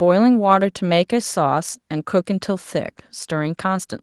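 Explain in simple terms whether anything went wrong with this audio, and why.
Nothing went wrong; this speech recording has no faults.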